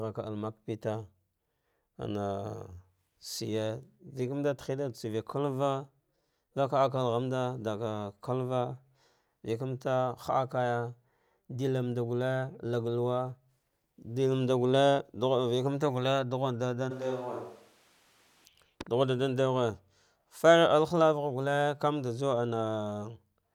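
From 16.92 to 18.44 s, likely a switch to a distant microphone: the speech abruptly turns roomy, hollow and thin, a few decibels quieter, with more room noise.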